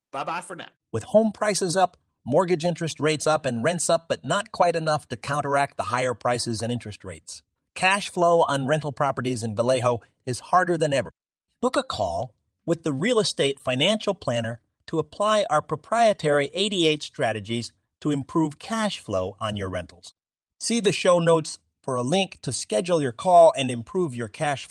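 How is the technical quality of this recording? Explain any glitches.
No technical faults are audible anywhere in this speech recording, so there are no glitches to explain.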